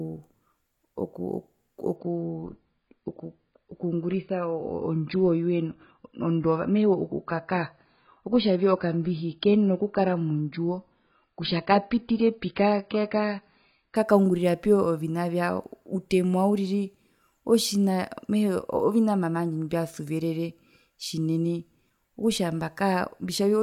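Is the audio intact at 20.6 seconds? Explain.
Yes, the speech at 20.6 seconds is intact, with no dropout, click, distortion or other fault at that moment.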